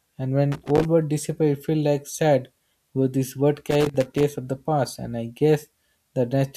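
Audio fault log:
0.52–0.85 s and 3.71–4.23 s, loose connector crackle: two irregular bursts of scratchy crackle cutting into the speech. A worn or dirty contact is flickering on and off as it shifts, chopping the signal into fragments.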